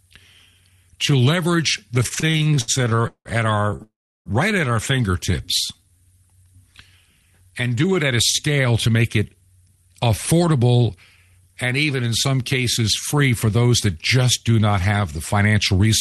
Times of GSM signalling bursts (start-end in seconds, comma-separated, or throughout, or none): none